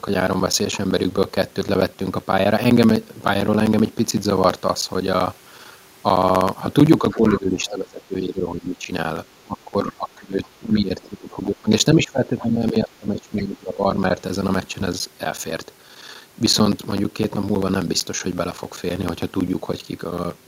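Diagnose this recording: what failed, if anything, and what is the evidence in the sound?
A steady train of ticks runs through the speech from 0.08 s to 20.44 s, one every 64 ms, each a gap of around 10 ms filled with silence. These are periodic USB or driver dropouts at the driver or buffer stage: something blocks the audio path on a fixed schedule and a slice of samples is lost each time.

The speech sinks in level in three stretches, 7.12 to 8.90 s, 9.44 to 11.70 s and 11.94 to 13.99 s, dropping by about 15 dB in the first and about 20 dB in the others. This is speech suppressed in double talk, in call processing: the echo canceller most likely attenuated the near talker while the far side was speaking.

Brief, faint fragments of another voice surface from 7.66 to 7.70 s and from 10.44 to 10.49 s, about 25 dB and about 30 dB below the speech. This is the other side's voice leaking through: echo from the loudspeaker, likely left over in the microphone signal because the canceller did not fully remove it.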